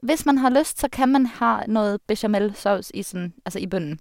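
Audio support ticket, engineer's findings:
No audible technical faults on listening; the speech signal holds steady and intact with nothing requiring action.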